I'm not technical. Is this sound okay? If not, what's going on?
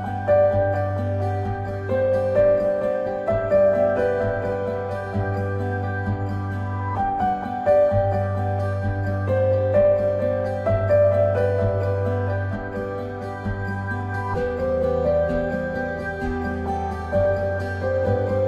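Yes, this one's fine, with nothing going wrong in it that you'd need to worry about.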